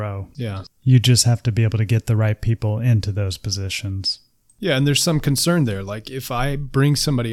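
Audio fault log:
No technical faults can be heard in this speech.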